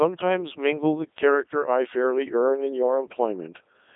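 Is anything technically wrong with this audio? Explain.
Yes. Throughout the speech, the Codec 2 vocoder has heavily damaged the sound. It transmits only pitch, voicing, energy and a spectral envelope, and the decoder rebuilds speech from sine waves, so the original waveform is gone. The result sounds robotic and buzzy, with a telephone-like band of about 300 Hz to 3.7 kHz, which fits its 3.2 kbit/s mode. A spectrogram shows nothing above 3.8 kHz and regular, synthetic harmonic striping, and the waveform looks smooth and periodic rather than natural.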